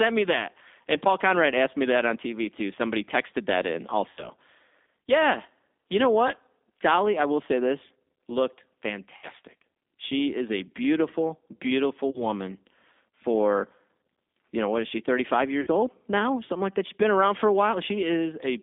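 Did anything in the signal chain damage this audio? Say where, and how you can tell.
Yes. G.729 codec damage runs throughout. Band limits of 250 Hz to 3.6 kHz and a rough, synthetic quality point to an 8 kbit/s speech codec.

VoIP packet loss concealed by the speech codec hits four times: 4.1 to 4.3 s after "texted that in", 9.17 to 9.29 s after "will say this looked", 12.1 to 12.2 s, and 15.61 to 15.68 s before "old now". The decoder stretches its last frame into a fading buzzy tone or coloured noise.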